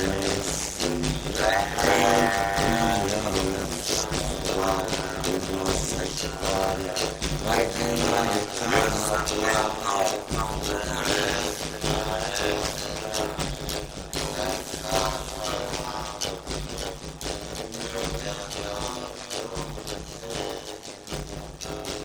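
Throughout, a block size mismatch (padded) leaves a zero-filled gap after each short block, which fits 256 written samples. The gaps recur every 10 ms, giving a 100 Hz buzz, and the audio runs at 0.533 times speed at normal pitch. The waveform shows evenly spaced flat gaps, and the spectrogram shows fine vertical stripes.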